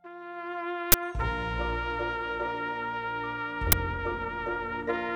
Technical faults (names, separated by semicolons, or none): uninitialised buffer